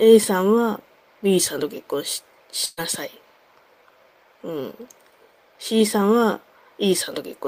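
At 2.65 s a burst of packet loss takes out about 120 ms, up to 2.80 s. The receiver stretches the last sound across the gap, fading it, so a held buzz or hiss replaces the missing stretch. Spectrally, frozen flat bands taper, then content jumps abruptly.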